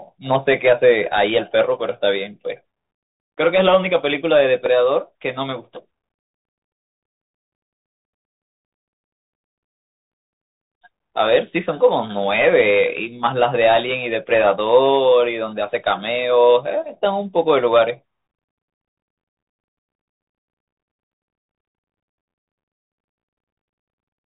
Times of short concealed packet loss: none

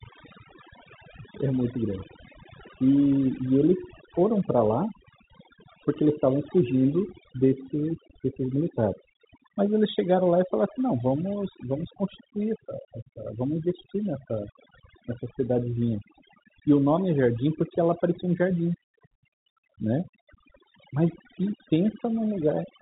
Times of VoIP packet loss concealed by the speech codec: none

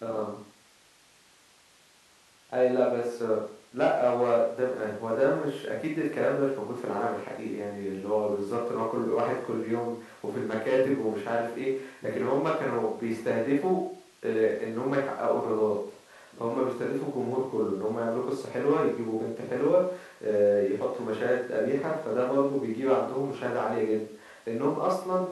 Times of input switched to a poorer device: none

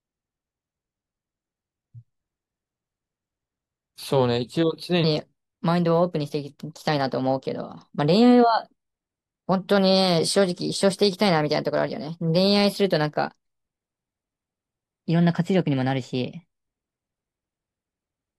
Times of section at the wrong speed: 5.04-18.38

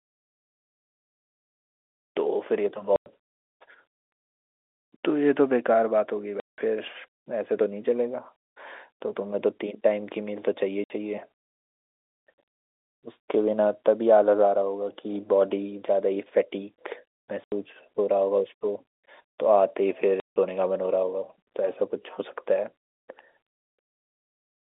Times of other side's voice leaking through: none

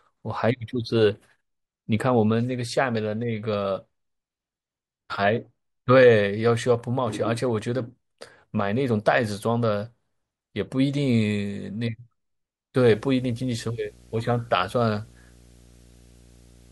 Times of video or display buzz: 12.84-16.72

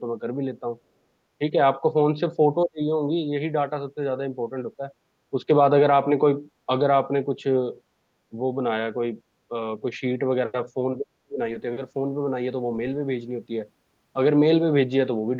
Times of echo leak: none

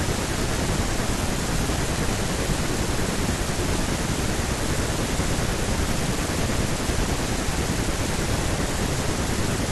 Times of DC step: none

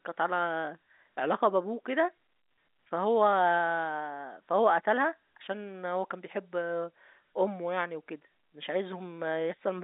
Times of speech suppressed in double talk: none

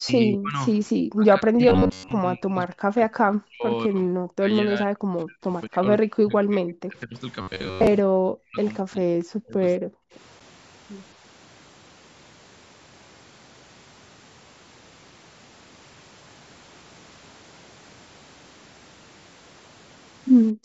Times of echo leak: none

